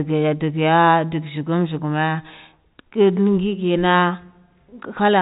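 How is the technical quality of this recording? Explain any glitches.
Nothing stood out as a problem on listening to this speech, which has the narrow telephone-band character of G.711 coding, with nothing heard above 4 kHz.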